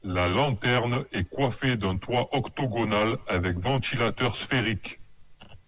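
No technical faults can be heard anywhere in the speech.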